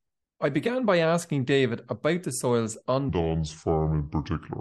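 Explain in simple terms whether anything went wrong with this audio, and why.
Right after "about the soils on", from 3.09 s to the end, the speech suddenly turns deep and sluggish, dropping roughly five semitones. This is a section at the wrong speed, playing at 0.718 times normal, likely because that part was fitted to the wrong clock.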